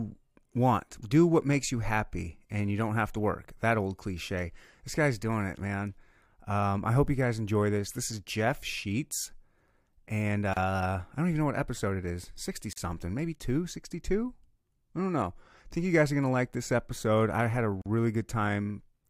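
A speech recording broken by three short silent holes, each a gap at a join of encoded pieces: 10.54 s for 32 ms, just before "I don't even know", 12.73 s for 43 ms, and 17.82 s for 42 ms, right after "episode I had a". Separately encoded segments were concatenated untrimmed, leaving encoder start delay and last-frame padding in place, so the sound halts abruptly and resumes where it stopped.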